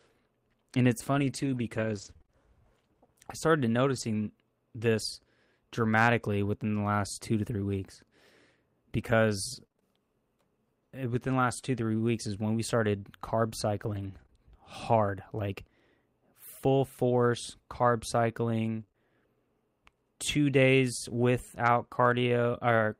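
From 1.13 to 4.02 s and 7.48 to 9.83 s (after "the last two to"), scattered short gaps: about four and five lost packets, each up to roughly 30 ms, patched by extending prior sound, heard as ticks, smeared as brief flattened spectrogram columns. From 13.79 to 14.21 s, a lost packet rebuilt from error correction: low-bitrate copies replace the originals, sounding rougher and noisier. At 14.23 to 14.26 s and 14.26 to 14.30 s, before "hard like", short concealed packet loss: 20 ms holes filled by continuing the last sound, a quick wobble. From 18.80 to 18.96 s, repeated packet loss (robotic sound): three holes, longest 27 ms, conceal 36% of the span, giving choppy sound with pieces missing, with stuttering, looped waveform cycles.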